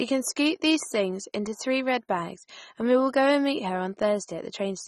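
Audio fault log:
throughout, AAC compression: the speech sounds dull and smeared, with warbling, fizzy sibilants and nothing above 15 kHz, likely from AAC-LC coding at a rate that fits about 24 kbps. Unlike a plain low-pass filter, the texture shifts frame by frame as bits are reallocated.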